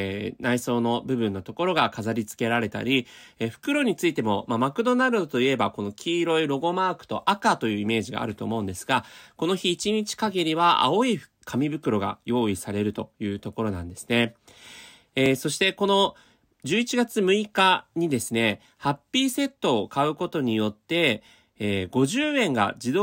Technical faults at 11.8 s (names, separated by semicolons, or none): none